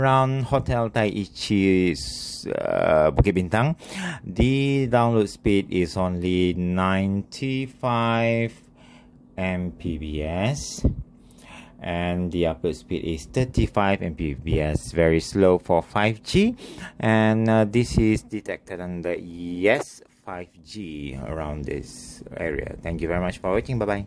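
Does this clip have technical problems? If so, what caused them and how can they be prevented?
No, nothing technical trips it up here, so there's no fault to trace back to a cause and nothing that needs preventing.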